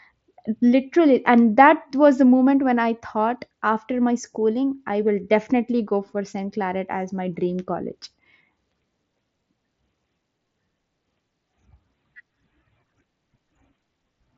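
No technical faults can be heard anywhere in this speech.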